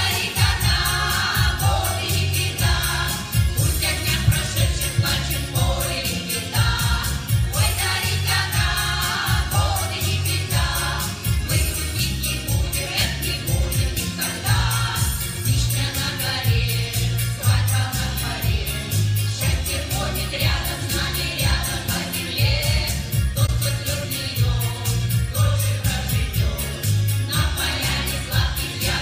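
At 23.46 to 23.49 s, a corrupt frame concealed: the decoder caught damaged AAC data, fitting two frames, and covered it.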